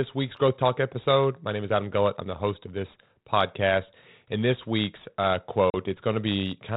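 Packet loss on an ADPCM call cuts a hard-edged hole of about 40 ms into this speech clip between 5.7 and 5.75 s, consistent with a couple of packets dropping and being filled with silence. Because G.726 sends only differences from an adaptive prediction, the receiving decoder's predictor and step size lose track of the sender's during the gap, so the speech resumes slightly distorted before settling within some tens of milliseconds. The 32 kbit/s coding itself leaves only light damage.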